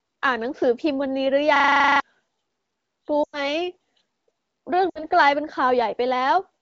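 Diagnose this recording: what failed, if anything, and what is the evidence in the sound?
Driver or buffer stage: a system hang loop from 1.56 to 2.0 s, where one 40 ms slice repeats exactly, giving a 25 Hz buzz. This is identical cycling, not decaying concealment.

Network stage: lost AMR speech frames at 3.23 to 3.47 s (100 ms) and 4.89 to 5.04 s (60 ms). The AMR-WB decoder reuses the last good settings with falling gain and drops to near silence within two frames, unlike an exact loop.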